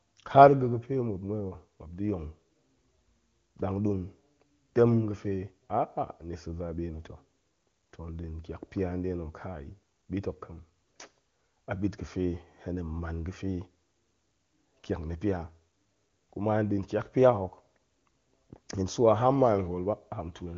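No faults are audible in this speech, which has passed through the AMR wideband (HD Voice) codec with nothing above about 7.3 kHz and only faint coding traces at most, consistent with the codec's highest rate.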